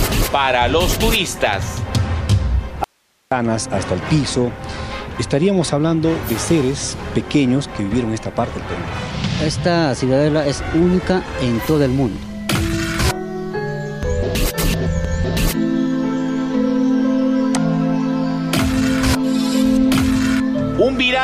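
An audio dropout to a faint residue runs from 2.84 to 3.32 s. For about 470 ms the sound cuts out abruptly, mid-flow. It does not fade or pause naturally. What remains in the gap is only hiss, sitting roughly 45 dB below the normal level. Then the audio snaps back just as suddenly. The likely cause is a brief loss of the wanted signal while the path after the break stayed live, passing only its own noise.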